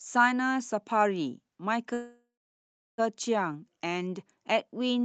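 At 1.93 s the speech stalls in a call audio freeze, likely because packets were held up in transit until the jitter buffer ran dry. The receiver stretches the last sound into a short fading buzz, then about 0.7 s of silence, before the speech resumes at 3.0 s from exactly where it stopped. Nothing is lost, but the roughly 1.05 s gap pushes everything after it later, over a call link whose audio stops near 8 kHz.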